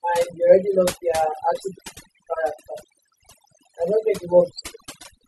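From start to finish, noise reduction was applied far too aggressively: overdone noise removal. Frequency bands near the noise estimate were cut almost entirely, taking quiet parts of the speech with them, so the background drops and breaks up into twinkling specks.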